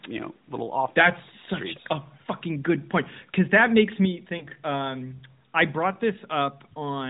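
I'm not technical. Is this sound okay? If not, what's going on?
No. Around 4.38 to 4.46 seconds there is a short hiccup: a case of lost AMR speech frames. One small slice of the mobile signal, about 20 ms of sound, was damaged on its way through the radio link. The phone's decoder covered the gap by briefly repeating the sound just before it, more quietly, so you hear a quick dip or wobble instead of a hard silence or click. That smoothing-over is what separates it from a plain dropout. The phone-call quality of the audio is simply how the narrowband mobile codec sounds.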